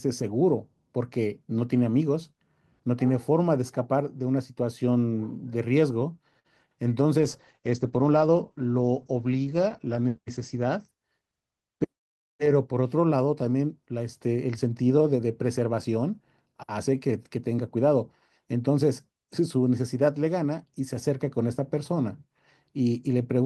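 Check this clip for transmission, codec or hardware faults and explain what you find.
Three transmission faults affect this speech clip, all within a few seconds of each other.

A short stall from a late packet occurs at 6.39 to 6.47 s. The packet arrived late and the jitter buffer ran dry, so the receiver stretched the last sound by 52 ms and then resumed where it had stopped. The result is one sound held slightly too long, with a faint buzz or dip. Nothing is skipped, which sets it apart from packet-loss concealment, where audio is replaced and lost. Everything after this point simply runs 52 ms later.

A call bitrate drop runs from 7.20 to 11.41 s. The bandwidth estimate fell and the Opus encoder went from 32 kbps to 11 kbps, staying at its lowest for nearly 3 s. At that rate it also narrowed the audio band from 20 kHz to 8 kHz. The speech turns muffled and rough or watery, then brightens again as the rate recovers. 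A fixed low-pass filter or a dull microphone would stay muffled throughout, and it would not add this coarse coding texture.

A jitter buffer speed-up happens at 11.04 to 11.33 s, overlapping the end of the bitrate drop. The buffer had built up extra delay, so the receiver cut about 50 ms out in small pitch-period pieces. This plays that stretch at about 116% speed. The speech sounds briefly hurried but keeps its normal pitch, which distinguishes it from a pitch or sample-rate error. It also has no audible gap, unlike a dropout.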